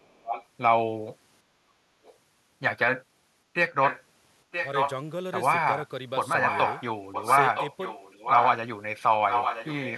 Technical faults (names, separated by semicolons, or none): echo leak; background gated by the echo canceller